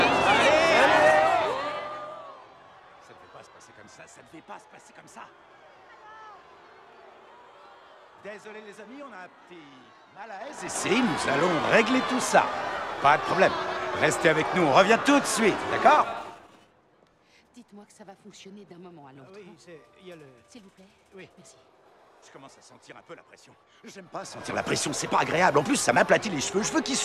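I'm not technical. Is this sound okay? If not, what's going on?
No. The volume is being moved in small jumps, about ten a second, instead of gliding smoothly. This is called zipper noise. Each jump makes a faint click, so you hear a ticking zip as the sound drops at 1.02–2.30 s and 15.96–16.81 s, and as it rises at 10.33–10.84 s and 23.98–24.49 s.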